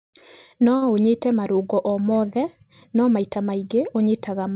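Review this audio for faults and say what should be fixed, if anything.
At 0.76 s there is a short stall from a late packet. It lasts until 0.84 s, just before "ũnyite marũngo o mothe". A packet missed its playout time, so the jitter buffer ran empty. The receiver stretched the last sound by 56 ms to fill the gap. When the packet arrived, playback resumed from the same point. No speech is lost. But the sound is held too long, with a faint buzz or dip, and the delay grows by 56 ms. The narrow band, with nothing above 4 kHz, fits a G.711 mu-law call path at 64 kbps. To prevent this, give the jitter buffer enough headroom to absorb late packets on this network.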